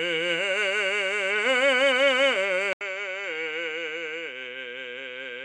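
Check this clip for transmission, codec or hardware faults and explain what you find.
Two faults are audible in this music: codec damage running through the whole clip, and an abrupt change of input partway through.

MP2 compression, throughout: the music sounds dull, with a gurgling, granular grain, and nothing reaches above 12.2 kHz. This is likely MPEG Layer II at a rate around 80 kbps, which starves the upper sub-bands of bits so that they switch off and the remaining ones are coarsely quantised.

Input switched to a poorer device, from 2.73 s to the end: after an 80 ms gap, the music comes back boxier and slightly quieter, about 5 dB down, with the top cut at 7.6 kHz and a faint new hiss far beneath it. A change to a narrower-band microphone or headset profile fits this.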